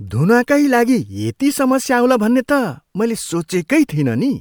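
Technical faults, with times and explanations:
No technical faults are audible anywhere in the speech.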